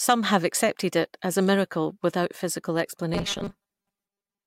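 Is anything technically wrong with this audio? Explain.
Yes. From 3.14 s to 4.47 s the speech turns into a rigid, metallic 200 Hz buzz that still roughly tracks the words: robotic sound from repeated short buffers. A 5 ms chunk is likely being replayed for about half the time, unlike a clean dropout, which leaves silence.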